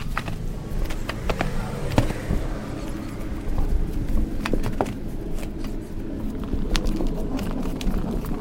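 Playback is running at the wrong sample rate, about 2.76 times faster than the capture rate, which fits 16 kHz audio played at 44.1 kHz with no conversion. These sounds therefore run 2.76 times too fast throughout and are raised about 17.6 semitones, sounding squeaky and compressed in time.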